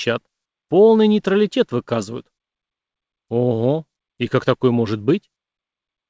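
Nothing is technically wrong with this audio; it has come through a G.722 call path at 64 kbps, which leaves nothing above 8 kHz.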